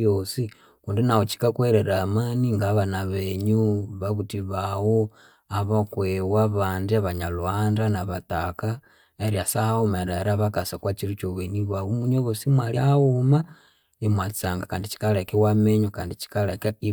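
At 12.75 s the speech jumps forward slightly: compressed frames skipped. About one frame of the encoded stream, with a frame length of 23.2 ms, never reached the output, either missing from the file or rejected by the decoder as damaged, so roughly 20 ms of audio is lost.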